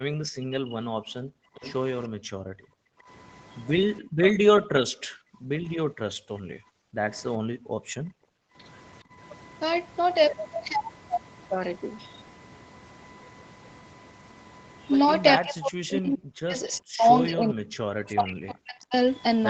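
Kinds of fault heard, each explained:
USB whine: Current drawn by the USB bus in 1 ms frames leaks into the audio through the power or ground wiring. Here it sounds as a steady whine pitched at 1 kHz, which is also its strongest component, and it stays at about 30 dB below the speech for the whole recording. It never shifts in pitch.
Speech suppressed in double talk: When both ends talk at once, an echo canceller can fail to tell the local talker from loudspeaker echo and pull everything down. The speech dips sharply, as much as about 40 dB, in three places. The first covers roughly the opening second, from 0 to 1.09 s. A brief dip follows at 6.13 to 6.26 s, and a long stretch runs from 15.37 to 18.95 s. Double talk is the likely cause.
Background gated by the echo canceller: While the far end's audio plays on the loudspeaker, the canceller clamps the microphone hard to keep echo out. The room sound drops away by up to about 40 dB and comes back when the canceller releases. 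This occurs at 1.37 to 1.55 s, 2.09 to 3.08 s, 4.01 to 5.63 s and 6.54 to 9.17 s. The gaps range from a fraction of a second to about two seconds.
Echo leak: Part of what one side's loudspeaker played got past its echo canceller and was sent back down the line. Between 1.62 and 2.07 s a faint copy of the sound comes back about 0.42 s late, roughly 20 dB under the speech. The likely cause is incomplete cancellation at a loudspeaker end.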